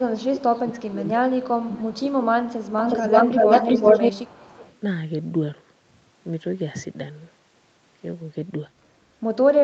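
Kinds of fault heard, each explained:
Speech suppressed in double talk: from the start to about 2.36 s the voice is likely being turned down by an echo canceller caught in double talk, dipping by roughly 20 dB in places. On a waveform the envelope sags and breaks into gaps, and a spectrogram shows the upper bands thinning during those dips.
Echo leak: a delayed copy of the voice comes back through, likely from a loudspeaker whose echo was not fully cancelled. Faint scraps sit about 30 dB down at 246 ms delay near 0.11, 0.69 and 1.7 s. From 2.47 to 4.78 s a copy delayed 369 ms runs about 5 dB louder than the speech, showing as a repeated, offset pattern on a spectrogram.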